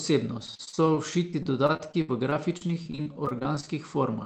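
From 0.39 s to 3.68 s the speech suffers repeated packet loss, giving a robotic sound: thirty short holes, the longest 64 ms, are each patched by stretching the preceding sound, so about a fifth of that span is synthetic fill. Unlike one isolated dropout, the gaps recur every fraction of a second, producing steady choppy sound rather than a single break. Above it sits the Opus call path's top limit near 8 kHz.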